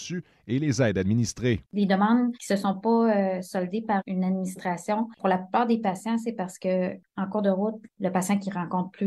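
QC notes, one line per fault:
Nothing to flag here; I listened all the way and didn't hear a single problem worth a line.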